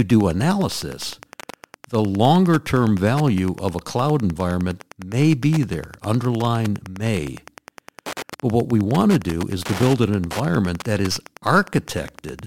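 A speech recording with Wi-Fi interference running through it from start to finish. A steady tick repeats every 102.4 ms, about ten times a second. A nearby radio's beacon is being rectified by the audio circuit. It sits roughly 20 dB below the speech.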